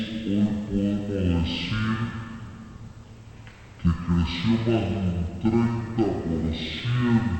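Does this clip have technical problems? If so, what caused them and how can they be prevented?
Yes: stereo read as mono throughout, with the whole clip at 0.5x speed and 12 semitones low; a faint mirror image in the upper spectrum sets it apart from a simple sample-rate mismatch. Prevent it by reading the file's channel count from its header and de-interleaving left and right samples before playback.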